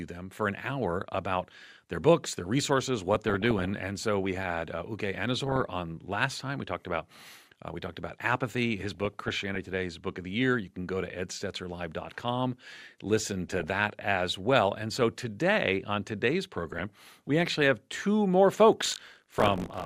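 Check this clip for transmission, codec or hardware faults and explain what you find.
Two faults are audible: DAB burbling in six places and buffer tearing at the end.

DAB burbling occurs at 3.15–3.70 s, 5.46–5.66 s, 8.85–9.74 s (after "we talked about apathy", before "book of the year"), 13.48–13.71 s (before "as well"), 16.55–17.27 s (between "so today on today's" and "we actually have two") and 19.38–19.66 s. Bit errors of around 0.4 to 0.7 percent get past error correction and corrupt MP2 samples and scale factors, so single sub-bands get short noise blips and jump in level for up to a frame. The result is burbling over the speech.

Buffer tearing runs from 18.82 s to the end. The writer and reader of the ring buffer have drifted so their positions cross each period. About a tenth of every buffer replays audio roughly 40 ms old, with hard joins on both sides. This gives a robotic 50 Hz buzz that is present only while speech is playing.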